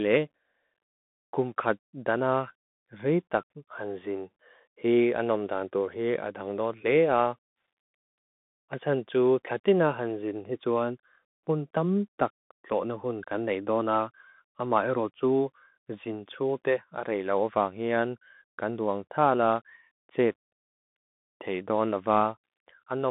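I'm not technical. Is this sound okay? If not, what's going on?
No. From start to finish the speech sounds thin, boxy and muffled, like a cheap phone call, with a gritty, grainy hiss under it and rough, scratchy s sounds. This is the Bluetooth CVSD headset codec, the basic mode a wireless headset falls back to for calls. It squeezes the sound into a narrow band, roughly 200 Hz to 3.6 kHz, dropping the deep and bright parts, and its crude encoding adds the audible grain.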